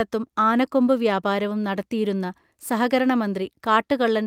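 The speech recording carries no audible technical faults at any point.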